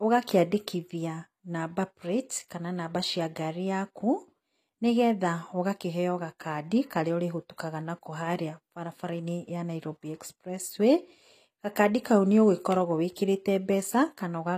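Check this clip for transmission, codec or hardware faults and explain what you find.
One fault runs through the whole speech recording: low-bitrate audio saved at a high bitrate.

Across the full 14.6 seconds, nothing sounds above 14.9 kHz, and the speech carries the smeared, watery coarseness of heavy compression. A high-bitrate MP3 should reach higher and sound cleaner. The likely cause is an earlier low-bitrate encode, consistent with HE-AAC around 24 kbit/s, later re-saved as MP3 near 192 kbit/s. Unlike a simple low-bitrate MP3, the artefacts don't match the generous final rate, and the re-encode can't restore the lost detail.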